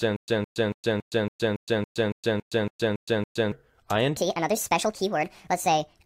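From the very start until 3.52 s, a stutter with silent gaps: a 163 ms burst repeats every 280 ms, with 116 ms of dead silence between, likely a stalled stream replaying its last fragment. From 4.17 s to the end, a section at the wrong speed: the sound runs 1.55 times too fast and about seven semitones high, likely from playback on a mismatched clock.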